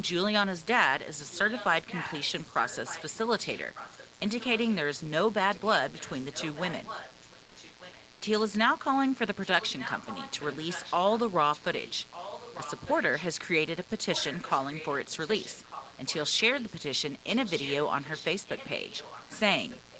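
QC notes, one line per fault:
throughout: mains buzz. There's a steady, raspy buzz about 25 dB under the signal, built on 60 Hz harmonics that climb well up the spectrum. It comes from sharp switching spikes, twice per mains cycle, getting in through a dimmer, rectifier or poor shielding.
1.30–4.96 s, 5.52–8.07 s, 9.41–11.19 s, 11.52–13.28 s, 13.84–16.74 s, 17.19–19.99 s: echo leak. A copy of the speech trails the original by about 1.2 s, sitting about 15 dB down, and closer, about 10 dB down, in the 9.41–11.19 s stretch. It's likely a far-end loudspeaker feeding its mic past an echo canceller that didn't fully clear it.
7.45 s: comfort noise in place of the background. For about 100 ms the real room background, sitting roughly 30 dB under the loud parts, gets swapped for a flat, featureless hiss at the same level. The likely cause is Opus discontinuous transmission filling a pause with synthetic noise.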